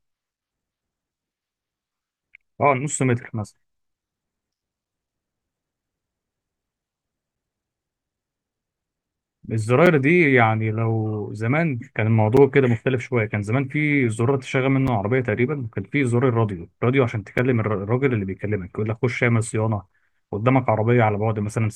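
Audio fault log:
2.34, 4.85, 7.36, 9.86, 12.37, 14.88, 17.38 and 19.89 s: gap between chunks. Speech delivered in 2.5 s chunks gets 6.5 ms of silence at each join, heard as brief holes at a steady rhythm.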